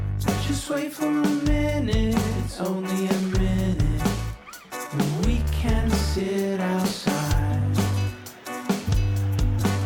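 Clock drift between sender and receiver runs through the whole clip. The sending device's audio clock runs about 1.5% slower than the receiver's, so samples arrive a little more slowly than they are played out. The jitter buffer keeps draining, and the receiver has to stretch the incoming audio to avoid running dry. The result is a faint, persistent unsteadiness in timing rather than any single obvious break.

Repeated timing corrections follow from that drift, from 0.64 s to 9.81 s. To keep the buffer from emptying, the receiver repeatedly duplicates short pieces of audio. All the corrections go the same way and fall at uneven intervals, adding up to something like 150 ms of extra material. The net effect is playback at about 98% of the original pace, heard as a slightly dragging tempo with small, irregular hiccups where repeated fragments are spliced in.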